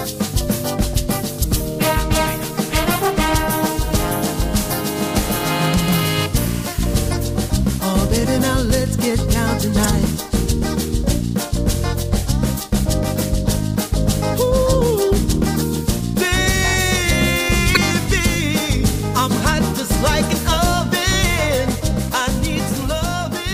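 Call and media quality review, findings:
Damaged data in a compressed stream: short glitches, about 40 ms each, at 1.40–1.44, 7.10–7.14, 9.81–9.86, 17.73–17.77 and 20.21–20.25 s. Corrupt frames, so the decoder misreads them, loses sync and hunts for the next header. Check the delivery path.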